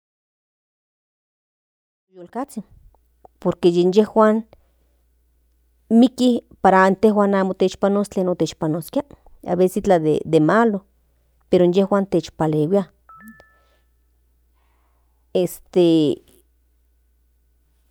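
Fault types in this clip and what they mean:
No technical faults can be heard in this speech clip. The level rises in a smooth fade-in from around 2 s that reaches full level at 2.92 s, with no click or hard edge.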